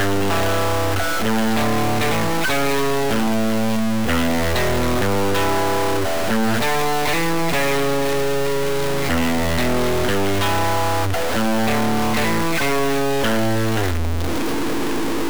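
From start to finish there's a distortion riding on the sound, and the quiet gaps don't fall silent but fill with noise. That points to a stuck bit, likely a data line or converter bit frozen at one value, knocking many samples off.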